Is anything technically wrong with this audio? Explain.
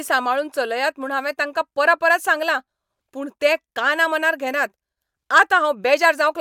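No, there's nothing technically wrong here that I can hear, so there's no fault to point out in this one.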